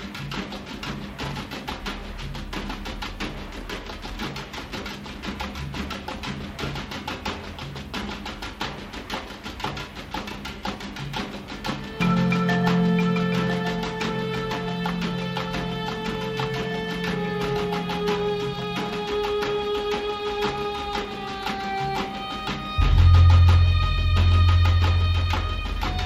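Nothing technically wrong turns up on listening; no faults to report.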